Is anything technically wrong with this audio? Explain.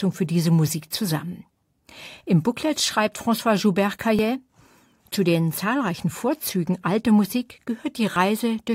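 Yes. The speech has two tiny skips, at 4.19 s and 8.16 s, where the waveform jumps as a few milliseconds of sound go missing. This is overlap between stream segments. The audio arrives in 2-second segments whose time stamps overlap at these boundaries, and the player trims the overlapping stretch even though that sound wasn't actually duplicated. Roughly 5 to 7 ms are lost at each joint, leaving a discontinuity in the waveform.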